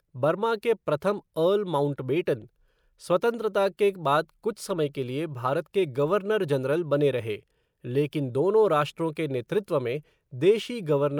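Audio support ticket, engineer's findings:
No audible faults found.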